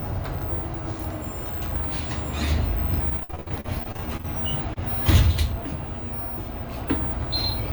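From 3.09 to 4.26 s, packets repeatedly arrived late or not at all. Each hole, the longest about 60 ms, was patched by extending the preceding sound. Roughly a third of that stretch is patched, giving choppy, robotic repeated packet loss with fragments missing.

At 4.74 to 4.78 s, a single short concealed packet loss drops about 20 ms that never reached the decoder in time. The receiver stretches the last sound across the gap and blends back, leaving a brief smear or wobble.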